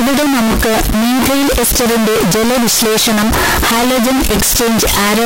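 Float read as integer runs throughout the speech, from start to end. The waveform sits near-square at an almost fixed, high level, so everything is harsh and overloaded and background noise matches the speech in level, though pitch stays traceable. The likely cause is 32-bit float samples being read as 32-bit integers.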